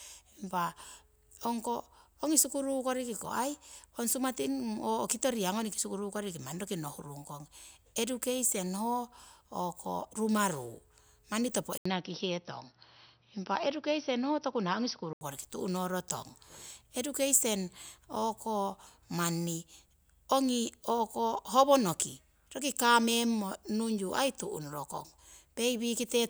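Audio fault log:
11.78–15.21 s, input switched to a poorer device: the speech suddenly goes dull and a bit boxy, with nothing above about 5.8 kHz, right after a short 80 ms gap. A faint new noise floor comes in, roughly 45 dB down, while the loudness stays about the same. At 15.21 s the top end comes back. The likely cause is the recording jumping to a narrower-band mic or headset profile for a few seconds and then switching back.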